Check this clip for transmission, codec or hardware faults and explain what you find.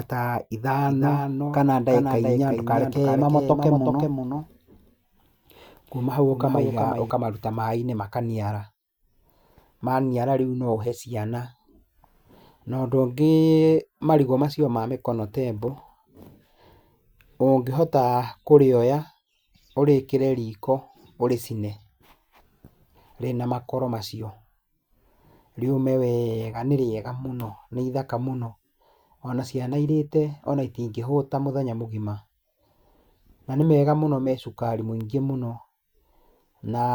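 One fault stands out. From 0.88 s to 7.1 s there is a doubled audio track. A second copy of the speech trails by about 400 ms, roughly 5 dB quieter, and starts and stops abruptly. It is likely a slower second capture path mixed in.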